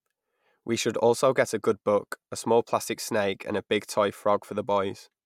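Speech, with no audible faults.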